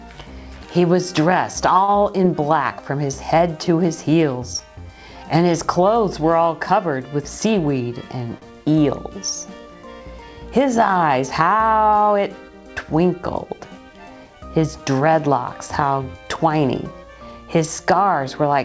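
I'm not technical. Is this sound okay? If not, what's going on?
No. At 1.84 s and again at 8.38 s there is a short stall from a late packet. A piece of audio arrived late, so the sound was held still for about 40 ms while the system waited. You may hear a brief stretched spot or faint buzz, but nothing is lost.

From 7.45 to 7.81 s there is a jitter buffer speed-up. Too much audio had built up waiting, so the system trimmed tiny slices to catch up, removing about 40 ms in all. The sound runs about 9% faster there, with no change in pitch.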